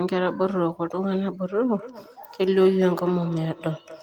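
Feedback echo between two devices runs from 1.69 s to the end of the clip. Two devices in the same room share the call, so one plays back what the other's microphone captured, and that microphone hears it again. Each device's echo canceller only subtracts its own playback, so this loop goes unremoved. The speech returns roughly every fifth of a second, thinner and ringing, peaking about 15 dB below the direct speech.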